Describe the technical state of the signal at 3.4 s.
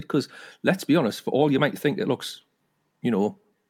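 At 3.4 s the signal is intact, with no audible fault at that moment.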